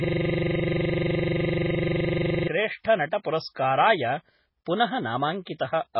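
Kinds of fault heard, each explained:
MP3 compression: The sound is heavily damaged in the way a low-bitrate perceptual codec damages it, most likely MP3 at around 16 kbps. Nothing is present above about 5.6 kHz. Weak frequency detail flickers from frame to frame, giving a watery, swirling texture.
System hang loop: The clip opens with this fault already under way, and it lasts until 2.48 s. A 42.67 ms piece of audio repeats exactly, about 57 times. That gives a rapid stutter at 23.4 Hz, which fits a 2048-sample buffer replaying while the system froze.
Pre-echo: The codec spreads its noise across a whole block, so the noise lands before a sharp onset as well as on it. This shows as a short hiss leading into attacks at 3.23 s (13 ms), 3.55 s (16 ms) and 5.45 s (16 ms). Those attacks sound softened.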